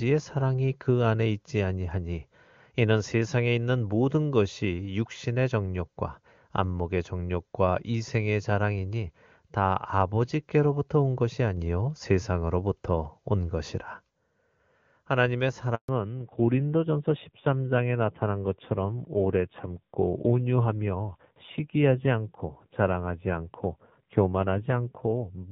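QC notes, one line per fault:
15.75 to 15.89 s, handover gap: the voice drops out for about 140 ms, fading within a few tens of milliseconds and then going completely silent until sound picks up again at 15.89 s. That's the signature of the call being passed between networks while no speech frames reach the receiver. Whatever was said in that window is simply gone, and there's no concealment or fill to cover it.
15.89 s to the end, fallback to narrowband: right after the gap the voice loses its top end. Nothing above 4 kHz survives, so the voice gets duller and rougher. The call has dropped from the HD Voice wideband codec, which before the switch sounds clean and fits a high rate around 23.85 kbit/s, to an old narrowband AMR mode that points to roughly 7.4 kbit/s.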